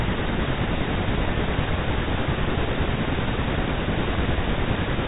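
No technical fault can be heard in this speech recording, which carries the expected narrow band of G.711 telephone coding with nothing above 3.8 kHz.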